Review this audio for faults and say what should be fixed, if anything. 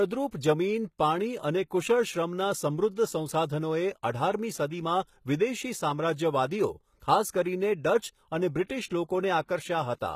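Throughout the speech, the treble sounds gritty and lispy, with nothing above 14.9 kHz. This is likely HE-AAC compression with band replication, which fits a rate near 20 kbps. On a spectrogram, the upper bands look like blurred copies of lower ones.

Pre-echo occurs at 7.00–7.02 s, 8.64–8.69 s and 8.87–8.91 s. Before each attack, noise spreads 23 to 54 ms into the preceding quiet, so the onsets sound smeared. On the waveform, this shows as a short hiss rising just before each attack.

Encode at a higher bitrate, or use a codec without band replication and with short-block switching, to avoid both faults.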